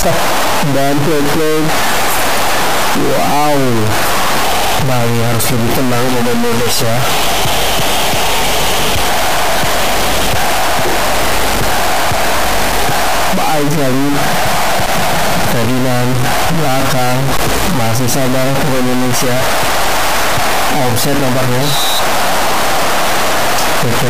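A harsh, buzzy distortion runs through the whole clip, and even the quiet gaps fill with loud noise, consistent with a stuck bit, likely from a broken data line or converter. A step of roughly -5 dBFS points to a high-order bit. The waveform shows samples jumping by that fixed offset, and the spectrogram shows broadband haze covering the pauses.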